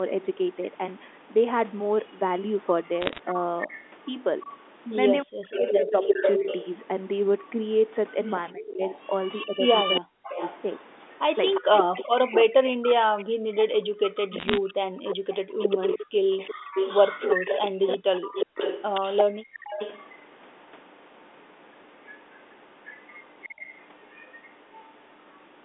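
Echo leak, 2.84 to 3.9 s: a copy of the speech returns 354 ms late, about 15 dB below the talker. This is likely a far-end loudspeaker whose echo canceller let part of the microphone pickup through and sent it back.

Bit errors on a digital phone line, 3.01 to 3.19 s: sharp ticks and a short burst of crackle sit over the speech. Flipped bits on the G.711 line, at a rate under one percent, each corrupt a single sample, and hits on high-order bits produce the clicks.

Speech suppressed in double talk, 5.23 to 6.47 s: the talker's level drops by up to about 40 dB, in pieces totalling about a second. This is likely the canceller turning everything down while both sides spoke at once.

Echo leak, 5.52 to 6.67 s: the 354 ms echo returns about as loud as the talker. The likely cause is the same canceller failing during the overlap.

Echo leak, 8.24 to 20.1 s: a long stretch of the delayed copy runs about 5 dB under the speech, likely the canceller not converging.

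Speech suppressed in double talk, 8.53 to 14.76 s: overlapping talk again pulls the voice down by up to about 40 dB, in gaps adding up to about three seconds. The likely cause is once more the canceller suppressing both sides.

Bit errors on a digital phone line, 14.39 to 14.58 s: a second short burst of crackling ticks comes from more flipped samples.

Background gated by the echo canceller, 15.16 to 19.64 s: the room sound dips by as much as about 40 dB, in brief drops totalling under a second. The microphone is clamped down while the loudspeaker plays, and the sound returns when the canceller releases.

Echo leak, 22.05 to 25.37 s: a faint 354 ms echo sits about 25 dB below the speech, likely residual leakage.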